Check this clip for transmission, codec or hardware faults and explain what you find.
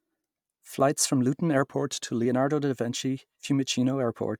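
One fault is audible: a drift correction step in the speech from 1.62 to 2.26 s. For that 0.63 s stretch the audio runs 6.2% slow and drops 111 cents, a little over a semitone, then snaps back to normal. The likely cause is clock-matching software briefly slowing playback to refill its buffer. On a spectrogram the harmonic stack steps down about 6% and jumps back at 2.26 s. The waveform shows slightly stretched periods across that span.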